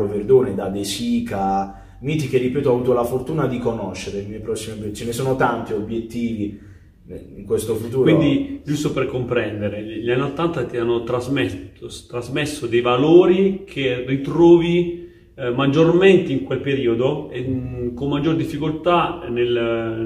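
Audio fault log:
No technical faults can be heard anywhere in the recording, and the signal holds steady and continuous the whole way.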